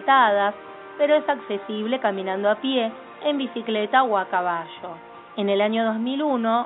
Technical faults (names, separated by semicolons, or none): none